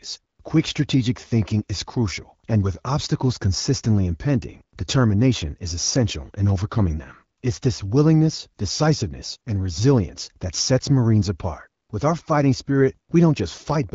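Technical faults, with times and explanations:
The speech carries the band-limited character of the AMR wideband (HD Voice) codec, with content up to about 7 kHz and the crisp, intelligible quality that points to a rate around 12.65 kbit/s.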